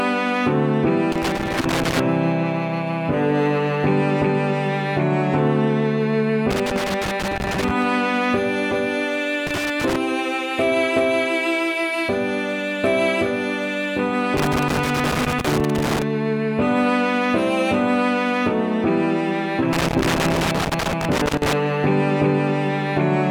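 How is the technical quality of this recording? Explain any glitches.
The recording is marred by loose connector crackle, which breaks in five times: 1.12 to 2.00 s, 6.51 to 7.82 s, 9.47 to 9.96 s, 14.37 to 16.02 s and 19.73 to 21.53 s. A worn or dirty contact keeps making and losing connection, so the signal is chopped on and off and any DC on the line adds pops. Each burst sounds like irregular scratchy crackle lasting from about half a second to nearly two seconds. On a waveform the bursts appear as jagged dropouts and spikes. On a spectrogram they show as scattered broadband vertical streaks.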